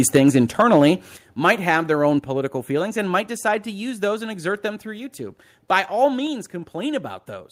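From the start to 0.89 s the loudest parts of the speech carry a crackling, gritty edge. That is microphone overload, likely from input volume set too high, so the peaks tried to go about 5 dB beyond the converter's limit and had their tops sliced off, around 2 percent of the samples in that stretch. At 0.17 s the level drops suddenly by about 2 dB, voice and background together. That is a microphone volume step-down, likely the call software reacting to the overload by turning the device's input down in one move. At 1.17 s a larger drop of about 7 dB follows. Between 1.46 and 1.75 s the crackle returns on the peaks, this time clipping them by about 2 dB and affecting under 1 percent of samples. Two further step-downs come at 2.19 s, about 4 dB, and at 6.27 s, about 3 dB, each a sudden reduction in the whole signal rather than a fade.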